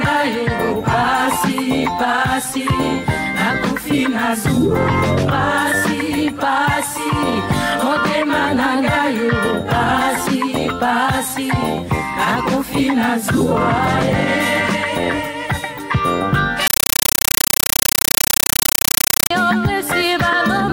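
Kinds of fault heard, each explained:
Compressed stream played as audio: an undecoded Dolby Digital bitstream treated as samples, giving loud chattering static from 16.67 to 19.31 s, 8 ms noise bursts repeating 31.25 times a second.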